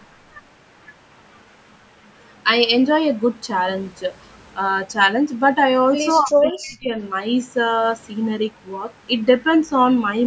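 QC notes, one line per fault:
6.22–6.91 s, speech suppressed in double talk: the speech drops by roughly 35 dB, a gated cut rather than dropout silence, likely the echo canceller ducking overlapping talk.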